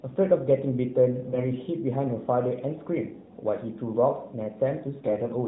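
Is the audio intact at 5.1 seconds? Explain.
No. From 5.02 to 5.27 s there are AMR bit errors: a few percent of the weakly protected bits are flipped, so excitation pulses and fine pitch, gain and spectral values go wrong. The sound turns hoarse and gargly at steady level. A spectrogram shows harmonics breaking into ragged noise below the 4 kHz narrowband ceiling.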